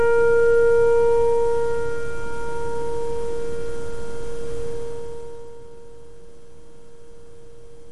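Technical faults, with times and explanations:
4.67 to 5.63 s, zipper noise: the level falls roughly 15 dB in unsmoothed steps of about 1 dB, some fifteen per second, each clicking, so the fade zips.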